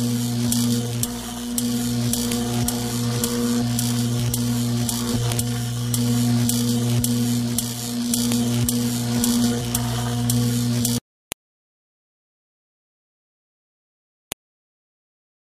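Sharp, loud clicks land at 2.32, 5.32, 8.32, 11.32 and 14.32 s, exactly 3.0 s apart. This is a file header played as audio: the sound was delivered in 3-second pieces whose WAV header bytes were left in and read as samples. What separates it from random clicks or dropouts is that strict 3-second spacing, and each snap arrives whatever the surrounding sound is doing, with no gap or loss of signal around it.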